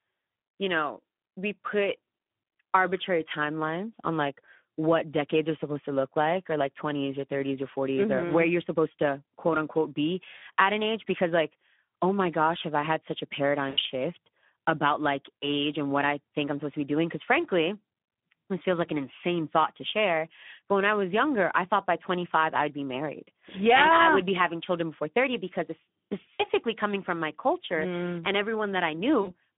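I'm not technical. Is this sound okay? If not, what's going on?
No. The whole recording passed through the Speex codec, a speech-compression scheme, and its damage is plainly audible, squeezed into a narrow phone-like band from 150 Hz to 3.5 kHz.

There is also VoIP packet loss concealed by the speech codec at 10.37 to 10.42 s, 13.69 to 13.79 s, 26.34 to 26.42 s and 29.21 to 29.32 s. The decoder filled each gap by stretching and fading the preceding sound.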